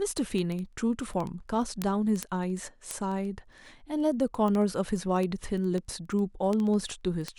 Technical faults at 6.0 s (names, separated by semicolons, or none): word clock ticks